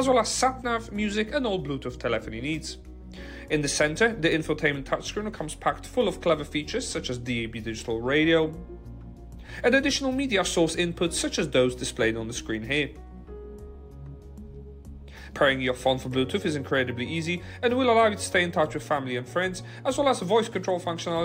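Nothing stood out as a technical fault on listening to this audio.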